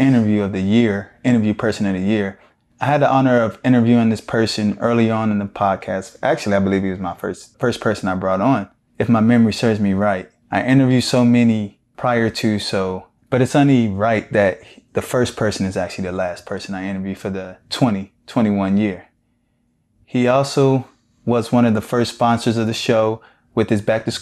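No technical faults can be heard anywhere in the speech, so there is nothing to describe in time order.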